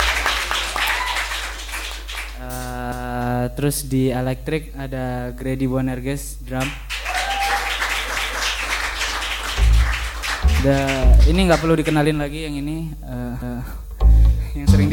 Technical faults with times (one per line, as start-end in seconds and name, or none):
2.92-3.17 overlapping chunks
8.17-8.42 overlapping chunks
13.42-13.67 overlapping chunks